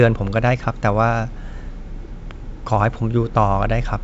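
Speech, with no technical faults audible anywhere.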